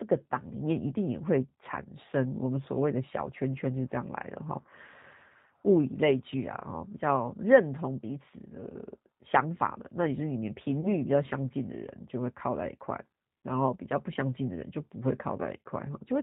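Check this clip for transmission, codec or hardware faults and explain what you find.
Two faults are audible: coding damage throughout the speech, and two brief dropouts patched over by the decoder.

The G.729 codec damage runs the whole clip. Each 10 ms frame is rebuilt from a vocal tract filter, a pitch predictor and a few pulses, which fits an 8 kbit/s G.729 coder. The result is slightly rough, synthetic speech with nothing above 4 kHz. Unlike plain low-pass filtering, the roughness sits in the voice itself.

VoIP packet loss concealed by the speech codec occurs at 4.62 to 4.66 s and at 10.81 to 10.92 s. Each gap is about 20 ms, which fits a single lost packet. The decoder extends its last pitch and filter at falling gain, giving a short fading buzzy tone or coloured noise instead of silence. Because each frame builds on the previous one, the second event stays weakened longer. Unlike a hard dropout, nothing goes silent.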